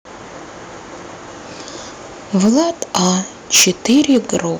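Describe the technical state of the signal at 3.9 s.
At 3.9 s the speech has a harsh, crackling, flattened edge on its loudest parts. This is microphone overload, running from 3.54 to 4.37 s. The input level was likely set too high, so peaks drove about 13 dB past the converter's ceiling and had their tops sheared off. Around 7 percent of the samples in that stretch sit pinned at the limit, and those cut peaks produce the distortion.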